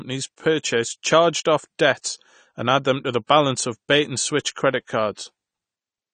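From start to end, the speech sounds dull and smeared. Sibilants come out fizzy, and held sounds warble. This is likely AAC compression, with the texture pointing to AAC-LC at a low bitrate, around 32 kbps. At that rate the encoder cannot keep every frequency line in each frame. It drops the top of the spectrum and leaves gaps. The damage is plainly audible.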